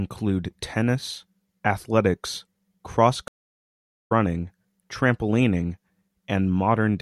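A speech clip where the audio drops to silence for 0.79 s at 3.28 s and resumes at 4.12 s roughly 0.4 s further along, a stream reconnect with a fresh decoder.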